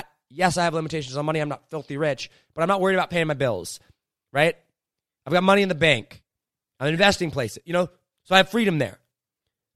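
At 6.97 s, between "in the bank I'm" and "places you know so", a corrupt frame decoded produces a glitch peaking around -30 dBFS. Flipped bits made the decoder misread gains and codes across roughly two frames, scattering energy into the wrong frequencies. At 8.40 s, after "you know so I", a single damaged frame gives a louder glitch. Unlike a dropout, which leaves a gap, or a click, which is one sharp edge, these are brief bursts of misplaced energy.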